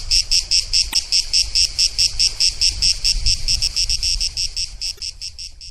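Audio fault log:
0.90–0.96 s and 4.95–5.01 s, damaged data in a compressed stream: corrupted bytes make the decoder misread frames and lose sync, producing two brief glitches of about 55 ms each.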